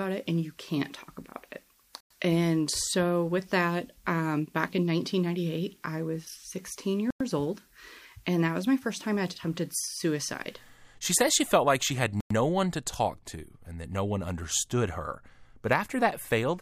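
The audio was delivered in 5-second chunks with 100 ms of silence inserted at each join, a gap between chunks. Short holes interrupt the sound at 2.01–2.10 s, 7.10–7.21 s and 12.20–12.31 s, recurring at a steady interval.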